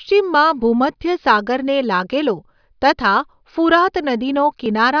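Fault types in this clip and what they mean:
Nothing stood out as a technical fault when listening to this speech recording.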